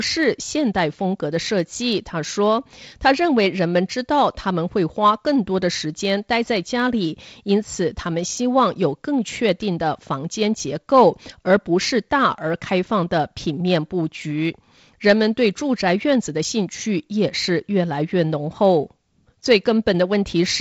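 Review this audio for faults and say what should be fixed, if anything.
Block size mismatch (truncated) runs throughout the speech: one stage writes blocks longer than the next stage reads, so each block's tail is discarded, leaving a steady 43.1 Hz buzz at the block rate, consistent with 1024-sample blocks, while pace and pitch stay essentially unchanged. Beneath this, the G.722 wideband coding at 48 kbit/s limits content to about 7 kHz. To prevent the buzz, make the reading stage consume the same block size the writing stage produces.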